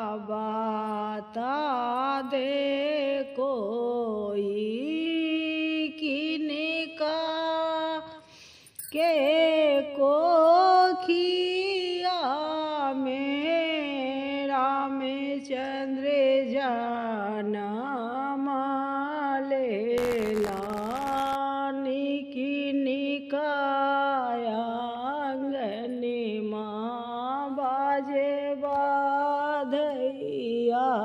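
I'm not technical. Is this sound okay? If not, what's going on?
No. From 19.97 to 21.36 s there is buffer tearing: a steady robotic buzz at about 86 Hz, which fits a 512-sample buffer. The software filling the audio buffer and the hardware playing it have fallen out of step, so each chunk contains a small slice, a few percent, of sound from roughly 50 ms earlier. The abrupt joins at both edges of that stale slice, repeating every buffer, produce the rattle.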